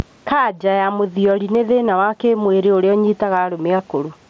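Speech heard through a Bluetooth headset link, with gain pumping throughout: the gain ducks by about 10 dB under each loud syllable, likely from a fast limiter reacting to excessive gain. Unlike steady room noise, its level moves with the speech. Concealed Bluetooth headset packet loss occurs at 1.85 s, between "ya mũthiori nĩ" and "wa kĩmwĩrĩ ũrĩa", and again at 3.78 s. These gaps are 7.5 ms and 15 ms long, consistent with one and two lost frames. Each is filled with a repeated stretch of the preceding waveform, so the single lost frame is nearly hidden.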